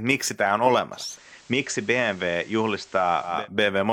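A short speech clip where the radio drops into analogue: from 0.92 s to 3.48 s it's digital radio blending to analogue, crossfading over about 283 ms to the station's FM feed and back. On the FM side the level dips by about 2 dB, and there's a faint hiss sitting well below the speech until it blends back to digital.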